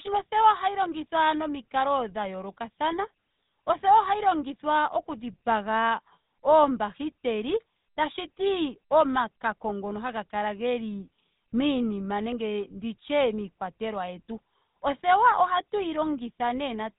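GSM full-rate codec damage runs through the whole of this speech clip, from start to finish, and it is plainly audible. The codec rebuilds the voice from a vocal-tract model excited by evenly spaced pulses that keep only every third sample, which gives the speech its buzzy, gravelly texture. Nothing survives above about 3.8 kHz, so the sound is dull and band-limited. The roughness fits a 13 kbps full-rate coder.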